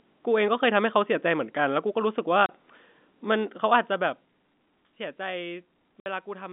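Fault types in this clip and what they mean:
Packet loss filled with silence: the speech cuts out abruptly at 2.46 s for 30 ms and at 6.00 s for 60 ms, which fits one and two lost 30 ms packets. The waveform drops to silence with hard edges, showing as blank vertical stripes on a spectrogram.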